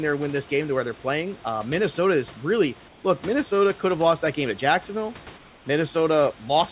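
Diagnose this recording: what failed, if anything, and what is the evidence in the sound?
In the call-processing stage, the background in two pauses is replaced by comfort noise: from 2.88 to 3.04 s, right after "is really", and from 5.38 to 5.66 s. In both gaps the room sound turns into a smooth, steady hiss about 2 dB quieter. This is likely discontinuous transmission, with the receiver synthesising noise while the sender idles. On a spectrogram the grainy background texture gives way to a uniform, featureless band below the 4 kHz ceiling of the G.711 path. The waveform shows a slightly lower, unnaturally even envelope.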